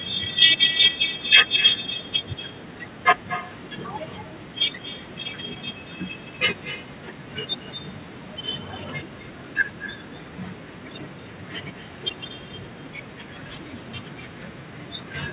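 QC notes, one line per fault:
Throughout, echo with no canceller: the far end is playing the call over a loudspeaker, its microphone picks that playback up, and no echo canceller strips it out, so the speech returns after the network round trip. Each phrase is trailed, about a fifth of a second later, by a copy roughly 11 dB quieter and thin, band-limited to 4 kHz like the rest of the narrowband call path.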